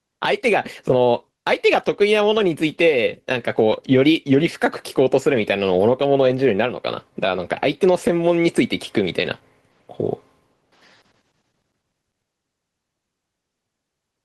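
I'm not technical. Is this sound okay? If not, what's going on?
No. Gain pumping runs through the whole clip, start to finish. Each time the speech gets loud, the level is pulled down, with a large swing between loud and quieter moments. The likely cause is a microphone level set far too high, with an automatic limiter clamping it down on every loud moment. That makes loud and quiet parts sit unnaturally close together, so the speech sounds squashed.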